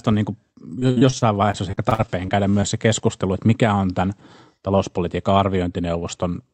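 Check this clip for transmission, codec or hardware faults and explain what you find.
One transmission fault is present in this speech clip: repeated packet loss (robotic sound) between 0.79 and 2.64 s. The call's Opus coding shows up as a top end that stops near 8 kHz.

From 0.79 to 2.64 s the speech turns choppy, with bits audibly missing. Packets were repeatedly lost or late, and each hole, the longest about 55 ms, was patched by stretching the preceding sound. Roughly a fifth of the stretch is concealed this way.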